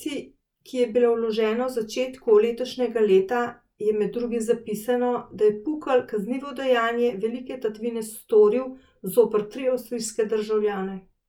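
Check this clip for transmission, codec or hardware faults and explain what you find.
No faults can be heard in the speech here. Nothing in the recording points to a problem anywhere along the path that delivered it.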